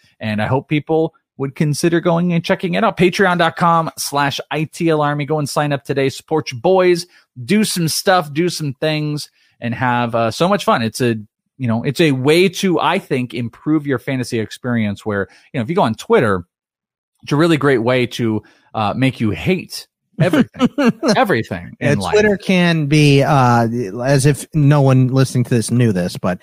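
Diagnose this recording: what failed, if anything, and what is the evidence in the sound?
Nothing in the speech points to a failure at any stage of the chain. No audible evidence implicates the wiring, conversion, processing, transmission, storage or playback.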